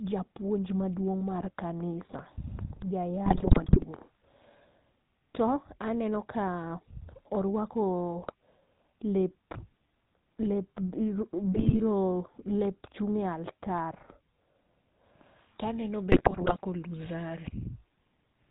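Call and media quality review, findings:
Buzzy, gravelly roughness across the whole speech clip, band-limited with nothing above 4 kHz. This is the GSM full-rate codec, plainly audible, consistent with 13 kbps. The vocal tract is modelled as a filter and excited by a regular pulse train, with only every third excitation sample kept. The thinned pulses give the grainy buzz, and the missing top octave dulls sibilants.

Squawks, pops and gargling bursts at 3.26–3.85 s, 8.22–8.34 s, 11.52–11.77 s and 16.12–16.59 s. These are GSM bit errors from a weak link corrupting decoder parameters. Damaged filter, pitch or gain values warp the spectrum or spike the level frame by frame. The first and last bursts run about half a second, the second barely a tenth.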